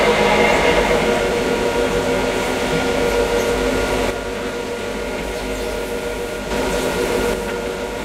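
From 4.11 to 6.51 s, and again from 7.34 s to the end, the sound abruptly drops by about 6 dB, likely because one channel drops out before the mono sum. Unlike a gradual fade or overall gain cut, the level steps down instantly and, the first time, back up.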